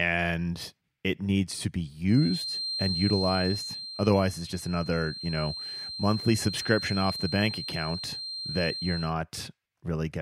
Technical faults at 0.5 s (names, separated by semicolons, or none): none